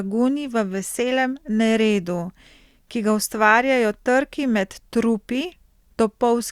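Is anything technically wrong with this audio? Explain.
No, nothing technically wrong can be heard in this speech recording. No fault turns up anywhere in the clip.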